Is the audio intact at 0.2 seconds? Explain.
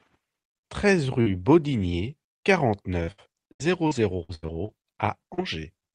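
Yes, the audio is intact at 0.2 seconds, with no dropout, glitch or other fault at that moment.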